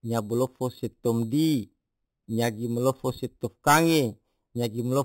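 Speech clip with imaging from sample-and-hold upsampling present throughout. The audio band stops near 4 kHz, and above it sits a mirrored copy of the speech spectrum filling roughly 4 to 8 kHz at about 16 dB below the signal. That pattern fits material at 8 kHz brought up to 48 kHz by repeating each sample with no interpolation filter. The result is a metallic fizz that tracks the speech level, with image components moving opposite to the voice pitch.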